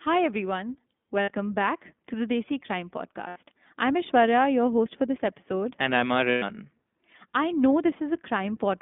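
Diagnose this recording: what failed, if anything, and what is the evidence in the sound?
Codec stage: the whole speech clip sits in a narrow band of roughly 200 Hz to 3.6 kHz, with a plainly audible rough, slightly synthetic texture. That grain, rather than a clean telephone-filtered sound, marks the iLBC codec, and it fits its 15.2 kbps mode with 20 ms frames.

Network stage: lost iLBC frames at 1.22–1.31 s (just before "back to the"), 3.28–3.38 s and 6.30–6.44 s, lasting about 60, 80 and 120 ms. Each gap becomes a held, buzzy vowel-like tone, fading in the longest, instead of silence or a click. The speech is clean again immediately afterwards because each frame decodes independently.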